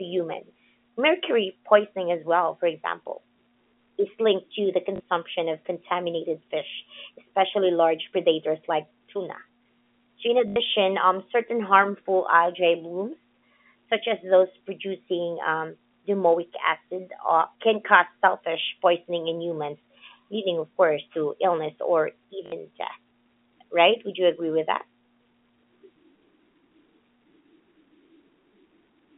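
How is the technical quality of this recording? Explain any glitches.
Three brief glitches interrupt the speech, which comes through a telephone line. Each is packet loss with the last packet repeated. At 4.96 s, after "is linked to the", 40 ms is lost. At 10.48 s, just before "um certain harmful algae", 80 ms goes. At 22.46 s, after "course to illness or", 60 ms goes. The receiver replays the last packet until new ones arrive. The loops ignore the pitch. The repeats buzz at 50 Hz, which fits 20 ms packets. Each gap sounds like a short robotic stutter.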